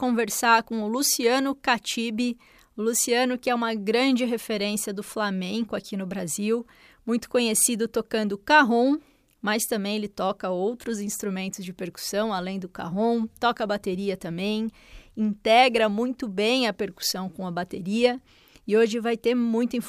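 No technical faults are audible.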